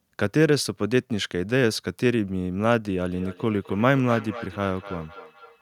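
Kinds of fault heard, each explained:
Feedback echo between two devices: from 3.12 s to the end of the speech, each sound returns roughly every third of a second. Two devices in the same room share the call, so one device's loudspeaker output reaches the other's microphone and is sent back. Neither echo canceller removes sound played by the other device. The returns peak at about 15 dB below the speech. A spectrogram shows fainter copies of each burst offset by that interval, and the waveform shows smaller repeated envelopes after each syllable.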